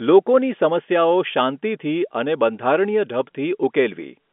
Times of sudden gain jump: none

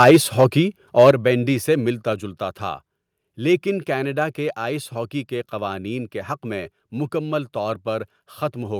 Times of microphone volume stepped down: 0.11, 1.11

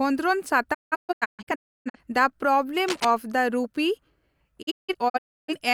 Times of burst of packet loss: none

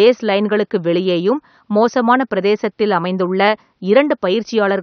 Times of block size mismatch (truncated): none

